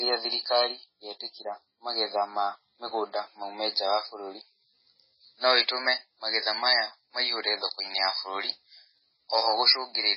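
Across the whole clip the speech sounds heavily processed: there is nothing above about 5.6 kHz, so sibilants lose their hiss, and the remaining band has a watery, swirling quality. This is likely MP3 compression at a very low bitrate, around 16 kbps. The encoder cuts the treble and drops weak frequency lines that flicker on and off between frames. On a spectrogram the energy stops at a hard ceiling near 5.6 kHz, and patchy holes appear below it.

Just after "maume nja wa bũrũri", periodic USB or driver dropouts begin at 4.99 s and repeat every 2.0 s through 8.98 s, three or so in all. Each time, roughly a millisecond of audio is lost and replaced by silence, so a small tick breaks into the speech. The waveform shows a brief flat gap. The spectrogram shows a thin vertical broadband line at each gap, evenly spaced.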